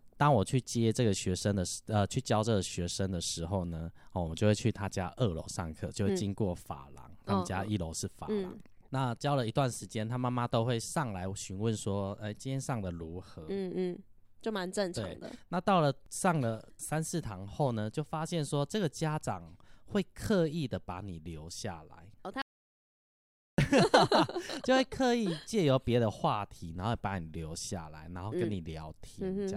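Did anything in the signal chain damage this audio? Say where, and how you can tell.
Yes. There is an audio dropout to silence from 22.42 s to 23.58 s, about 1.16 s of lost speech. The sound stops mid-flow and resumes abruptly, and the gap is silent with no room tone at all. A natural pause or a noise gate would leave some floor or fade. The input was likely lost at the capture stage, through a dropped device or link, while the recorder kept writing silence.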